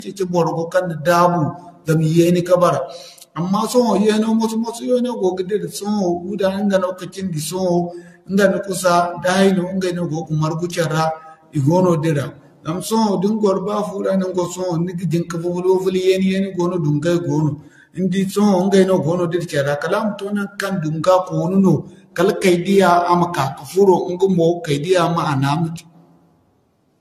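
Generation loss runs through the whole speech clip: swirly, hollow, smeared sound with blurred attacks, likely from about ten passes of lossy re-encoding, consistent with AAC-LC at 64 kbit/s. A spectrogram shows nothing above 14 kHz, scattered holes and smeared onsets.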